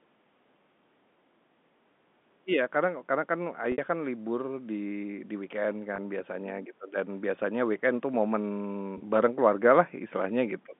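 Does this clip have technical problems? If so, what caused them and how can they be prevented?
Yes: packet loss with pitch repetition at 3.72 s (60 ms, likely three lost 20 ms packets), 5.96 s and 8.98 s (20 ms each). Each gap is filled with a repeated pitch period that fades out over about 50 ms, so the two short gaps sound like a briefly held, buzzy tone, while the 60 ms gap fades into silence before speech returns with a short cross-fade. A larger jitter buffer, forward error correction or a more reliable network path would prevent it.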